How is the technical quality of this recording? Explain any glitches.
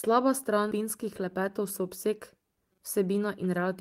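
There are two timing glitches.

At 0.71 to 0.73 s there's a skip ahead: about 400 ms of speech got dropped while later audio was queued, so playback jumps straight across with no gap.

From 0.80 to 3.75 s there's a jitter buffer speed-up: the buffer was overfull, so it kept snipping tiny pitch-period chunks, about 200 ms in total. Speech runs roughly 7% fast, same pitch, slightly rushed.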